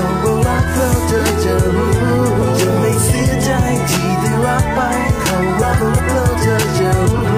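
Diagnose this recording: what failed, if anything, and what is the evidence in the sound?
Garbled flutters, 5.61–6.01 s and 7.05–7.37 s: frames out of order, with neighbouring 186 ms blocks swapped during network delivery.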